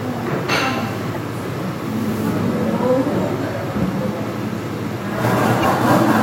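At 1.11 to 1.16 s and again at 5.61 to 5.65 s there's damaged data in the compressed stream: the decoder chokes on bad frames, loses sync, and spits out a short chirp, squawk, click or hole.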